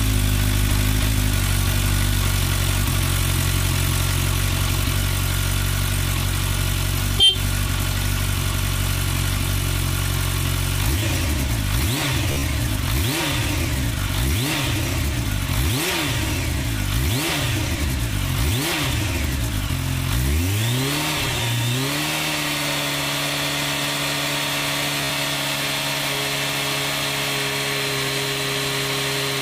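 At 12.32 s a Bluetooth stutter lasts about 0.12 s. Packets went missing and the receiver replayed its last short buffer, so the sound buzzes in rapid repeats. The longest run lasts 43.5 ms. At 24.98 s it recurs, with a 58 ms run. The sound then resumes as if it had played on.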